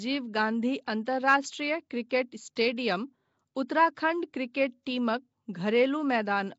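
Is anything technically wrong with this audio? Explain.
Yes. Throughout, the speech has a rough, hissy halo and a smeared, underwater quality, with nothing above 7.7 kHz, likely from Nellymoser compression, consistent with roughly 32 kbps.

At 1.05 s and 2.09 s, a brief hiss of about 14 to 15 ms smears into sharp attacks. This is pre-echo, where block-spread quantisation noise leaks ahead of each onset.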